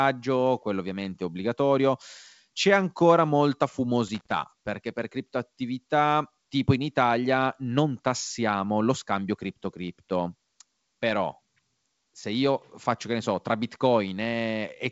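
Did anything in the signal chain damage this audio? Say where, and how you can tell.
Yes. A loose connector crackle in the analogue wiring runs from 4.08 to 4.37 s, right after "ancora molta" and before "perché per criptoattività tipo". A worn or dirty contact is making and breaking as it shifts, chopping the speech. On the waveform the stretch shows ragged dropouts. On the spectrogram it appears as irregular broadband vertical streaks reaching the G.722 wideband ceiling near 7.7 kHz.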